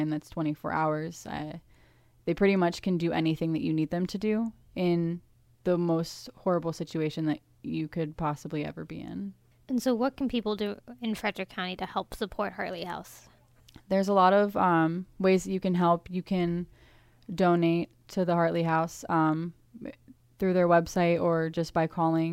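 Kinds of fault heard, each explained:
No faults are heard in this speech recording.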